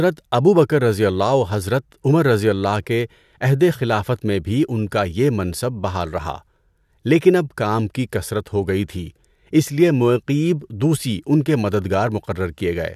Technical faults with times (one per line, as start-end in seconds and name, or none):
none